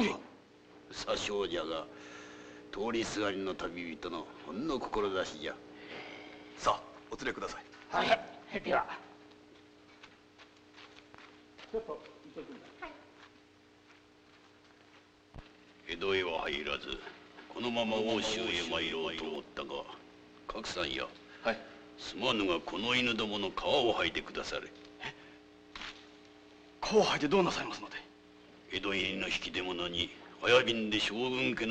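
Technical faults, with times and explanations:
17.37 to 19.35 s, doubled audio track: for about two seconds the sound is heard twice, with a second full-band copy trailing roughly a third of a second behind and only a few decibels quieter. The copy carries no reverb tail or room colour and appears and vanishes abruptly. This is likely the same signal being mixed in a second time through a slower path, or an edit leaving two out-of-step copies overlapping.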